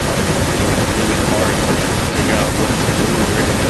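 From 0.0 s to 3.69 s the speech carries an echo leak: a second copy trails the original by about 0.4 s (397 ms) and is roughly as loud as the direct speech, so the voice is heard a second time. The likely cause is a far-end loudspeaker whose echo canceller let its microphone pickup return down the line. On a spectrogram the speech's harmonic pattern reappears shifted right by 0.4 s; the waveform shows matching envelope bursts at equal height.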